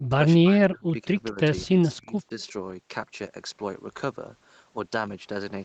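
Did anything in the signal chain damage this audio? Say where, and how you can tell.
Yes. The call processing stage produced speech suppressed in double talk. The speech level collapses from 0.0 to 0.13 s, again across 0.37 to 1.39 s, and across 1.66 to 2.5 s, with dips of about 40, 35 and 30 dB. On the waveform the envelope caves in, and on the spectrogram, already empty above 8 kHz from the call band, the energy breaks into gaps. The likely cause is an echo canceller that mistook the talker for far-end echo during simultaneous speech and attenuated the signal.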